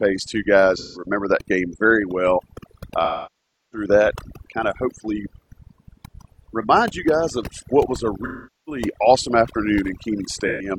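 Overdone noise removal runs throughout this speech recording: an over-aggressive noise reducer mutes frequency bands near its noise estimate, leaving twinkling, warbling specks and taking quiet parts of the voice with it. AAC frame loss with concealment occurs at 0.77 to 1.06 s, 3.04 to 3.87 s, 8.24 to 8.82 s and 10.47 to 10.70 s, where the decoder patched lost frames by rebuilding audio from the last good spectrum.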